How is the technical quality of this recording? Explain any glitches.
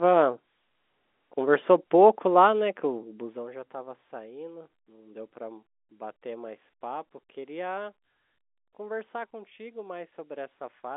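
Nothing stood out on listening to this recording; no glitches came through at any point.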